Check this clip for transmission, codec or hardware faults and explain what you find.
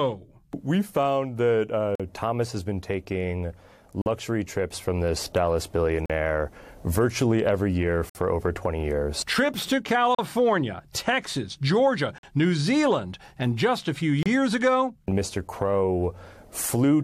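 The speech is interrupted by seven gaps between stream segments, at 1.95, 4.02 (after "has been taking"), 6.06, 8.09 (after "virtually every year"), 10.15, 12.18 and 14.23 s (after "and just a few"). Segment timestamps don't quite line up every 2 s, so the player fills each 30 to 55 ms hole with silence. The result is hard-edged dropouts that add time without losing any audio.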